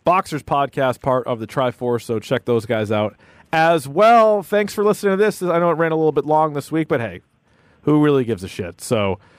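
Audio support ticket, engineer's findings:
Listened through the full speech recording: no dropouts, clicks, distortion, level jumps or other playback faults found, and no fix needed.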